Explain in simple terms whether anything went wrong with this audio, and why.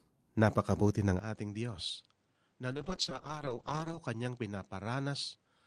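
At 1.19 s the recording likely switched its input to a poorer device, such as a different microphone or a headset's call mode. From there to the end the speech sounds duller and quieter, with the top end gone above about 9.8 kHz and faint new background noise.

A call bitrate drop runs from 2.75 s to 4.45 s. The connection told the encoder to use far fewer bits, at its lowest for about 1.3 seconds, so the speech turns rough, watery and more muffled before recovering.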